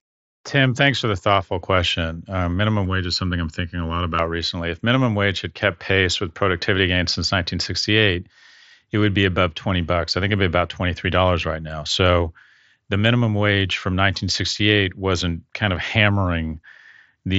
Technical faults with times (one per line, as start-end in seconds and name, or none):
2.85-4.19 channel delay (comb filtering)